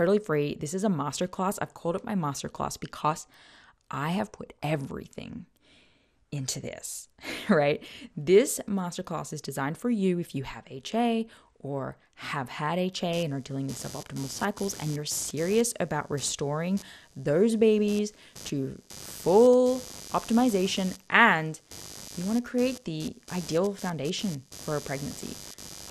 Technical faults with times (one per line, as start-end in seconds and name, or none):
0.00-25.91 MP2 compression
5.23-5.31 DAB burbling
13.13-25.91 computer activity noise
14.58-14.65 DAB burbling